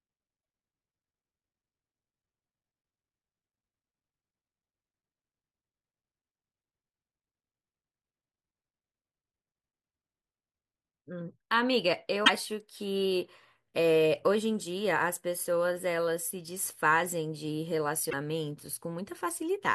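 Brief glitches at 0.38–0.41 s, 12.21–12.30 s and 18.07–18.14 s are damaged data in the compressed stream: corrupted frames throw the decoder out of sync until it finds the next header.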